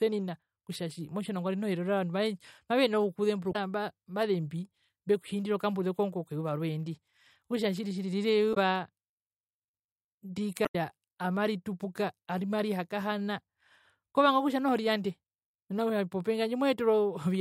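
Short glitches cut into the speech at 3.52 to 3.56 s, at 8.50 to 8.57 s just after "tjiri tjiri rira", and at 10.62 to 10.75 s just before "amaritupuka amarihakahana". They come from damaged data in a compressed stream: corrupted frames knock the decoder out of sync until it locks onto the next frame header.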